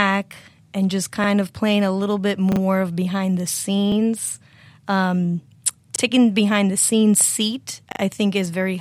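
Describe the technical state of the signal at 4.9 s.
At 4.9 s the speech signal is intact, with no audible dropout, clipping, distortion or other fault at that point.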